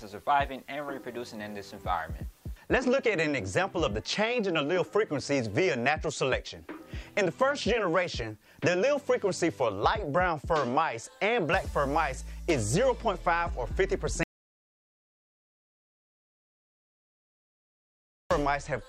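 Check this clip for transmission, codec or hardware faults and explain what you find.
One fault: an audio dropout to silence from 14.23 to 18.31 s, about 4.07 s lost, likely a lost input while recording continued. Unlike a quiet passage, the gap is complete silence with no room tone.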